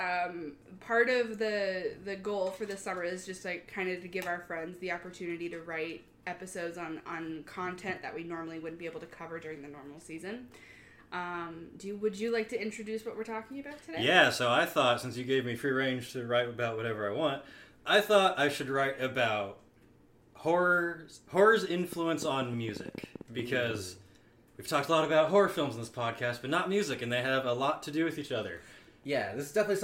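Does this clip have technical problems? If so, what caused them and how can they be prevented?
Yes. A train of clicks runs from 21.93 to 23.76 s: about twenty similar pulses at nearly 10 per second, unevenly spaced, peaking around 10 dB above the sound. Likely interference or a faulty connection or power supply. Shielding cables and checking the interface prevents it.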